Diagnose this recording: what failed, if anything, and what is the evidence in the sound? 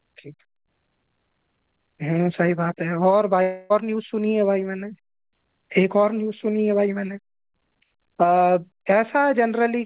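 Long network dropout, 3.42 to 3.72 s, in the network stage. For about 0.28 s the speech turns into a fading buzz or hiss as the receiver extends the last sound it held. It then resumes with that stretch missing, likely from lost packets, within telephone-band audio ending at 4 kHz.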